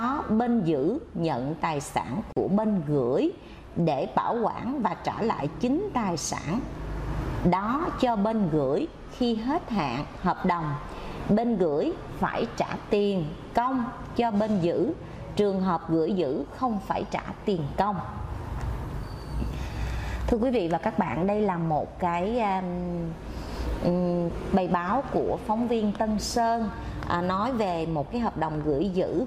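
A gap at a join of encoded pieces opens from 2.33 to 2.37 s, a silence of about 40 ms cut into otherwise continuous sound. Two separately encoded segments were butted together without trimming, so the encoder's start-up delay and the padding of the last frame both survive as dead air. The dropout's edges are blurred by the codec, and the sound then resumes exactly where it left off.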